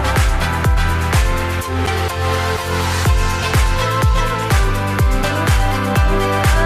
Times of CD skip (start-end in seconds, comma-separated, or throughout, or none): 1.86